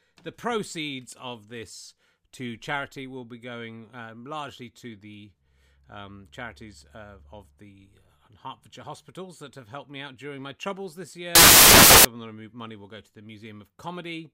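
From 11.35 to 12.05 s, loud, harsh broadband noise swamps the speech. These are samples built from the wrong bytes: misassembled values turn the low bits into noise.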